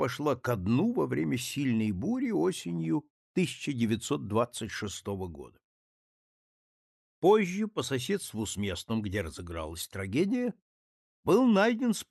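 No technical faults can be heard; the audio comes through a working WebRTC call path whose Opus coding keeps content up to around 12 kHz, at a bitrate of about 64 kbps.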